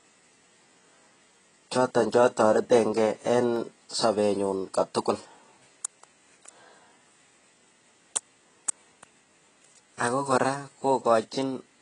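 Dropped samples at 1.35 s and 3.56 s break this speech recording with two single sharp clicks. At each point the waveform jumps straight from one value to a later one, with only a fraction of a millisecond missing. That is far too little to remove any sound, but the sudden step is heard as a tick and shows as a thin vertical line across the spectrum. The likely cause is a brief glitch in the audio stream. AAC compression colours the whole clip. The heavy codec damage leaves the sound dull and smeared, with a warbling, fizzy texture on sustained sounds and sibilants. This is likely the result of AAC-LC encoding at a very low bitrate, consistent with about 16 kbps, where the encoder lowers its cut-off and thins the spectrum to save data.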